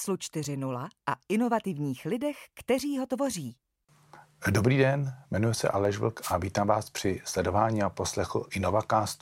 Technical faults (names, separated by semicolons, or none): dropped samples; wireless microphone noise hit